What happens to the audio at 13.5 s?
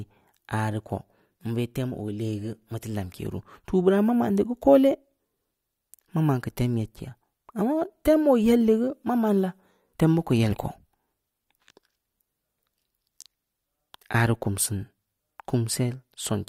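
Nothing goes wrong at 13.5 s; the audio is intact at that moment, with no dropout, click, distortion or other fault to be heard.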